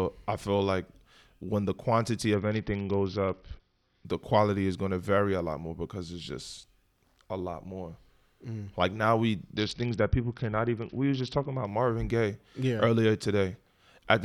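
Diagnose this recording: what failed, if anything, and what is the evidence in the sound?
Bluetooth SBC bit pool drop at the codec: at 2.34–4.05 s and 9.56–11.67 s, the speech dulls and turns gritty as upper sub-bands starve, fitting a bit pool near 7.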